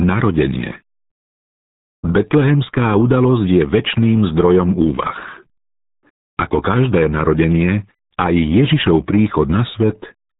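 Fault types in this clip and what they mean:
RealAudio 14.4 codec: the speech runs through the RealAudio 1 dial-up codec throughout. Its heavy damage, fitting a rate of about 8 kbit/s, leaves it muffled and gargly. A spectrogram shows a hard ceiling at 3.9 kHz with empty space above.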